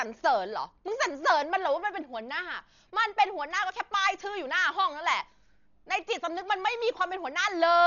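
A speech recording that has likely passed through heavy Dolby Digital compression at a low bitrate, consistent with about 40 kbps. Throughout, nothing survives above 7 kHz, so it sounds dull, and coarse dither-filled spectral lines leave a rough, fluttering noise around voiced tones.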